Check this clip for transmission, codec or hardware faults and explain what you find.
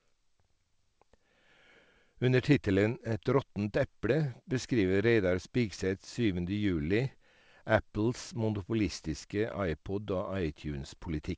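Nothing faulty can be heard in this speech recording.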